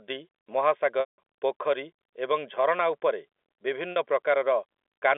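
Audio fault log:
1.00–1.18 s and 3.92 s, packet loss with pitch repetition: audio is missing for 180 ms and then 40 ms, both consistent with runs of 20 ms packets on the G.711 telephone stream. The receiver fills each hole by looping the last pitch period. The 40 ms gap sounds like a short, buzzy held tone. The 180 ms gap outlasts the roughly 50 ms fade on the repeated period, so it drops to silence before the audio cross-fades back in.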